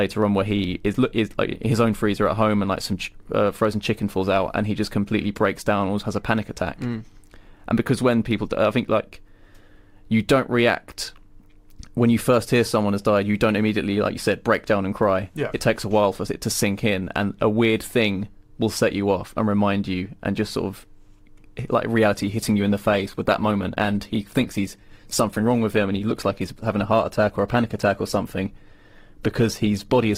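Right around 22.16 s the quality drops all at once and stays down until the clip ends at 30.17 s. That's an adaptive stream switching to a lower bitrate, where the player grabs a leaner version when the connection slows. There's no gap, just more codec artefacts on the speech. The change sounds like Opus going from around 64 kbit/s down to about 16 kbit/s.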